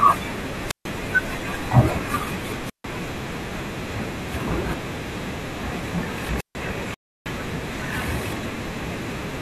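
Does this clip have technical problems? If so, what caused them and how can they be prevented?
Yes. There are three wireless microphone squelch dropouts, at 0.61 to 0.90 s, 2.64 to 2.84 s and 6.34 to 6.55 s. Each time the hiss rises briefly, then there's 140 to 150 ms of near silence while the receiver mutes the fading radio signal. Keeping the transmitter close to the receiver with clear line of sight, and fresh batteries and well-placed antennas, should stop these.

At 6.94 s the sound simply halts for 315 ms and then carries on, which is a playback stall, likely from the player running out of data or its thread getting blocked. A larger playback buffer and an audio thread kept free of other work should prevent it.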